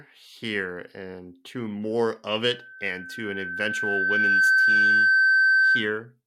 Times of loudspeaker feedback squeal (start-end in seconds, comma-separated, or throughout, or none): 2.45-5.95